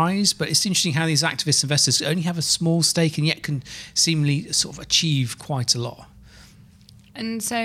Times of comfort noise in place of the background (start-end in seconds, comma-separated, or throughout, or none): none